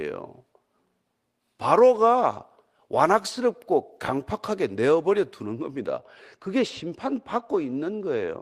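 From 5.46 s to the end at 8.42 s, de-emphasis has been applied wrongly: a treble cut meant to undo pre-emphasis hits speech that either never had any or had already been de-emphasized, sloping smoothly down to about 10 dB lower at 10 kHz than at 1 kHz. The speech turns dull and muffled, and on a spectrogram the upper bands fade progressively from that point on.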